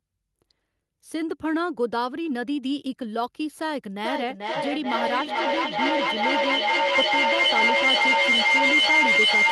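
Speech with a feedback howl from 4.04 s to the end. The loop keeps gaining, repeating about every 0.4 s and narrowing to a tone near 2 kHz, peaking about 7 dB above the speech. Unlike echo, it grows rather than fades.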